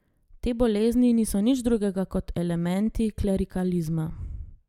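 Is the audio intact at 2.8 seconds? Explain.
Yes, the speech at 2.8 seconds is intact, with no fault to be heard at that moment.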